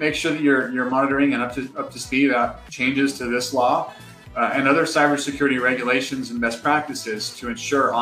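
A brief glitch breaks into the sound from 0.89 to 0.94 s, lasting roughly 50 ms before playback carries on. This is damaged data in a compressed stream: a short stretch of the encoded bytes arrived corrupted or missing, so the decoder could not interpret those frames correctly. It lost its place in the bitstream and had to hunt for the next valid frame header, producing that momentary glitch until it locked back on.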